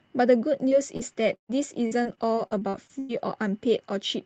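From 0.69 s to 3.19 s the speech suffers repeated packet loss, giving a robotic sound: around a dozen dropouts, the longest 139 ms, are patched by extending the preceding audio, so roughly a fifth of that stretch is synthetic, heard as choppy fragments with pieces missing.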